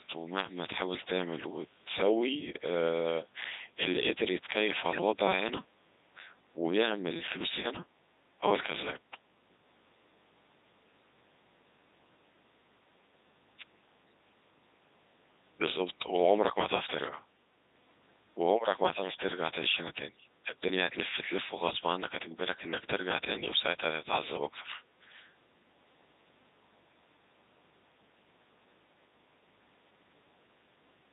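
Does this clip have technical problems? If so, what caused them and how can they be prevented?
Yes. For the whole clip the speech sounds robotic and buzzy, with a synthetic tone in place of a natural voice. This is the Codec 2 vocoder at 3.2 kbit/s. It transmits only pitch, voicing, energy and a coarse spectral envelope, and the decoder rebuilds the voice from sine waves, so the original waveform never arrives. The damage here is heavy. To prevent it, use a higher-bitrate codec or a waveform codec when the channel allows.

From 21.70 to 21.77 s there is a brief warbling glitch, where the synthetic voice lurches in pitch, level and tone colour for about 70 ms. This is caused by bit errors on digital voice radio. Flipped bits, at a rate of a few percent, corrupted the parameters that steer a whole vocoder frame, and the disruption's length fits about two frames. Stronger signal margin plus forward error correction or interleaving would prevent it.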